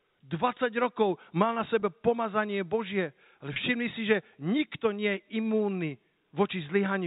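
Packet loss with pitch repetition occurs at 1.80–1.82 s, right after "mal na", and again at 3.54–3.56 s, just before "všimni si že nikto". Each time about 20 ms of speech drops out, which fits a single lost packet, and the receiver fills the gap by repeating the last pitch period. The patch is brief, so it comes across as a slightly held, buzzy tone rather than silence, heard through the telephone-band G.711 coding.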